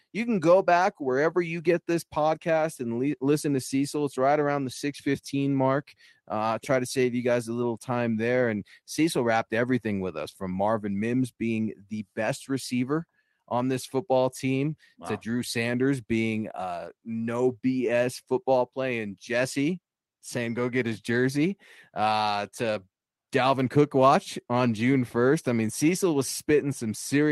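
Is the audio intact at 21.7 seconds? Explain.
Yes, the audio is intact at 21.7 seconds, with no audible fault at that moment.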